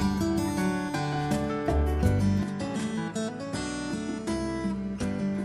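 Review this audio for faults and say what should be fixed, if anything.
From 2.43 s to the end, the spectrogram loses everything above 11.4 kHz and the waveform steps down about 5 dB, with a new, quiet noise floor and no gap, likely an input switched to a poorer device. Lock the recording input to one device and disable automatic device or headset-profile switching during capture.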